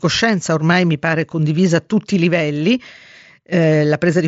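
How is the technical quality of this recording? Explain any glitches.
No audible glitches or faults.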